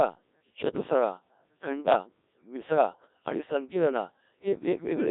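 The whole clip is Codec 2 vocoder speech at 1.3 kbit/s, band-limited to about 250 Hz–3.7 kHz. The voice is rebuilt from sine waves, so it sounds heavily buzzy and robotic. From 2.89 to 3.08 s, bit errors on digital voice radio corrupt a few frames, around one bit in ten. The pitch and level jump, and the speech breaks into warbling gibberish.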